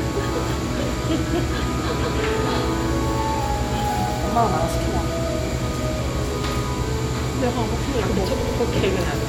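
At 2.03 s the sound stutters: the stretch from 2.03 to 2.18 s, a 156.7 ms block, plays once more immediately after itself. This is repeated frames, where a run of compressed frames was delivered twice and the decoder replayed it. At 8.40 s a shorter 78.4 ms block repeats twice more. Each event lengthens the audio by 156.7 ms.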